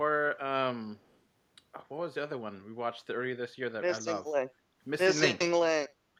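An echo leak appears from 0.97 to 1.17 s: a faint delayed copy of the speech trails the original by 240 ms, sitting very low, roughly 40 dB down. This is likely residual echo from a far end on loudspeaker, where the echo canceller failed to fully subtract what its microphone picked up and sent that remainder back.

Background gating by the echo canceller follows from 4.51 to 4.8 s. While the loudspeaker was active, the canceller suppressed the microphone, pulling the room sound down by about 8 dB at its deepest for roughly a third of a second. The ambience audibly dips and then recovers once the canceller releases.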